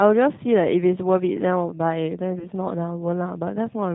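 From start to finish the speech has passed through a G.729 codec, and the thin, rough quality points to its 8 kbit/s rate. Rather than storing the waveform, the coder sends a vocal tract filter, a pitch predictor and a handful of pulses per 10 ms frame, so the decoder rebuilds an approximation. Nothing above 4 kHz survives, leaving the speech muffled, and the damage is plainly audible as a slightly buzzy, synthetic grain.

At 2.39 s a stretch of about 20 ms went missing, which fits a single lost packet, and the decoder covered the gap with VoIP packet loss concealment by the speech codec. It carried forward its last pitch and filter settings while turning the level down, producing a brief stretched, fading patch. Because each frame builds on the one before, the sound stays weakened and distorted until about 2.47 s.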